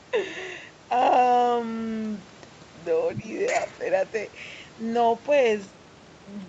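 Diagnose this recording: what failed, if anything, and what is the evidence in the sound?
Scraps of the other side's voice leaking through, about 10 dB down, at 3.11–3.22 s and 3.46–3.79 s: likely loudspeaker echo the call's echo canceller missed.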